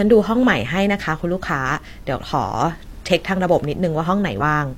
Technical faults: damaged data in a compressed stream

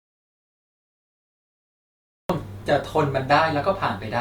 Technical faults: audio dropout to silence

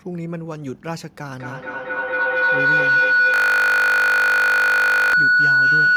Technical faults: feedback howl; system hang loop

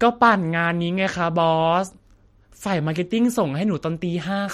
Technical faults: MP3 compression

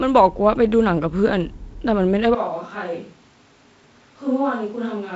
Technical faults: switch to a distant microphone

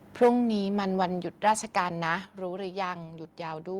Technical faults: microphone overload; microphone volume stepped down

